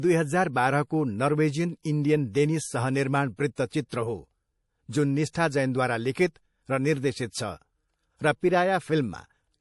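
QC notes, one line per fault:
Throughout: MP3 compression, likely from a low-bitrate encode around 48 kbps. Starved of bits, the encoder has cut the treble entirely, leaving nothing above 11.5 kHz, and drops weak frequency lines that flicker in and out from frame to frame. The speech therefore sounds dull and watery, with a swirling, metallic edge on s sounds and consonants that smear rather than snap.
3.55 s, 3.89 s, 5.33 s and 6.13 s: pre-echo. At each of these points a sharp onset sits late within a transform block, so the quantisation noise sized for the loud attack also spreads back into the quiet moment just before it, over 22 to 29 ms. Each attack is announced by a brief hiss and lands softened and blurred instead of crisp.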